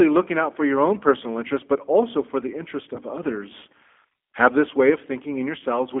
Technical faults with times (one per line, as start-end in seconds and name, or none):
0.00-6.00 G.729 codec
2.95-2.98 VoIP packet loss concealed by the speech codec
5.59-5.62 VoIP packet loss concealed by the speech codec